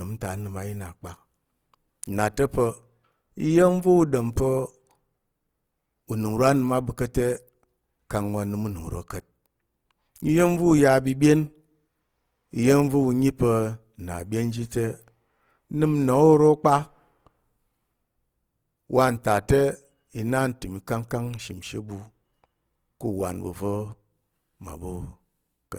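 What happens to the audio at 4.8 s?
At 4.8 s the speech sounds grainy and rough, as it does throughout. This is likely Opus compression near 24 kbps, filling starved bands with noise.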